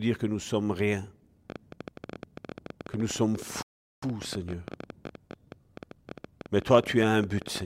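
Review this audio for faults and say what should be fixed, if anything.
A train of clicks runs from 1.50 s to 7.62 s, starting just after "que nous sommes rien". The likely source is electrical interference or a faulty connection or power supply repeatedly injecting short pulses into the signal path. In the recording this comes through as irregular ticking at around 13.3 clicks per second, roughly seventy in all, with peaks reaching around 5 dB above the speech. The pops stay audible in the gaps between phrases. To prevent it, isolate the interface from noisy equipment and check its cabling, grounding and driver stability.

A rebuffering stall cuts the audio from 3.62 s to 4.03 s. Playback ran out of downloaded data and halted until more arrived, then continued from the exact point where it stopped. The result is a sudden silent gap of 0.4 s inserted into the speech. Nothing is skipped, but the timing is stretched. 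To prevent it, allow a larger playback buffer or a lower stream bitrate so the download stays ahead of playback.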